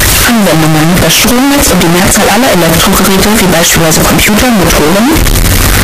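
Throughout the speech, the waveform is nearly square at an almost fixed, high level, very loud and harsh, with background noise as loud as the talker. Pitch stays followable. The likely cause is float read as integer: 32-bit float samples interpreted as 32-bit integers.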